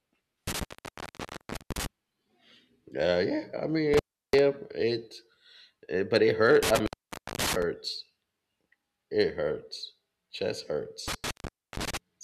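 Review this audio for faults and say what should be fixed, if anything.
A loose cable or plug is making intermittent contact, briefly opening the signal path. The speech drops out with crackle at each edge at 0.47–1.86 s (about 1.08 s open), 3.94–4.39 s (0.34 s), 6.63–7.63 s just after "but it" (0.53 s), and 11.08–11.97 s (0.47 s). Reseating or replacing the suspect cable and connectors, and securing them against movement, should prevent it.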